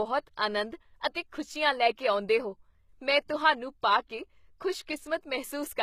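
The whole clip has the sound of HE-AAC compression. Speech above about 14.9 kHz is completely absent, and the treble you do hear is a rebuilt copy rather than the real thing. The likely cause is spectral band replication copying lower bands upward under a coarse envelope, which fits a low bitrate around 20 kbps. The damage is plainly audible: sibilants come out gritty and metallic because the copied harmonics don't line up with the originals.

Then there's pre-echo, first at 0.36 s, an 18 ms smear of hiss just before a sharp onset. Again at 3.28 s, between "ਲੈ ਕੇ ਆਉਂਦੇਹੋ ਮੈਂ" and "ਤੁਹਾਨੂੰ ਪਾ ਕੇ", a shorter 10 ms one. In both spots the attack landed late in a transform block, so quantisation noise sized for the loud part bled into the quiet gap ahead of it. The onsets sound softened, with a short hiss lead-in.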